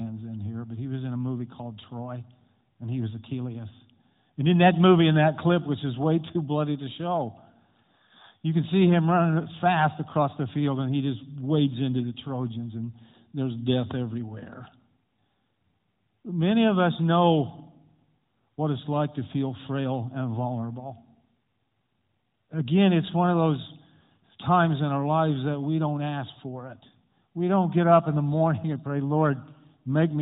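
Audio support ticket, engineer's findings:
No faults found in the speech clip. Narrowband mobile path audible as expected: nothing above 4 kHz, with the light, slightly synthetic texture of AMR-NB at 12.2 kbps.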